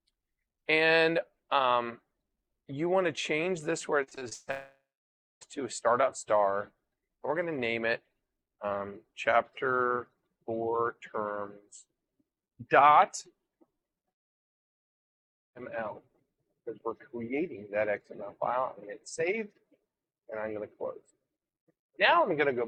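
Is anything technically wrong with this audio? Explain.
Yes. There are three kinds of fault.

From 4.03 to 4.49 s there is repeated packet loss, with a robotic sound. Six gaps hit this stretch, the longest 140 ms. Each gap is filled by extending the last sound, so more than half the span is patched. It sounds choppy and robotic.

Two long network dropouts follow. From 4.51 to 5.43 s the sound carries on as a fading buzz or hiss for about 0.3 s, then turns silent. From 14.09 to 15.57 s it goes silent almost at once. Audio that likely never arrived is skipped, and the sound resumes further on.

From 13.98 to 14.01 s there is a short concealed packet loss. About 20 ms of audio did not reach the decoder in time. The receiver briefly continued the previous sound and blended it back in, leaving a small smear or wobble.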